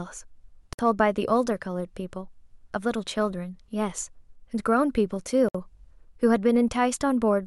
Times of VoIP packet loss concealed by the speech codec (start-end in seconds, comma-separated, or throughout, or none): none